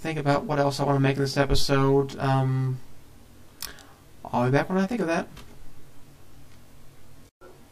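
Channel delay (comb filtering) runs throughout the audio. One channel lags by roughly 20 ms, so the mono sum notches evenly from about 20 Hz, sounding rough and slightly doubled.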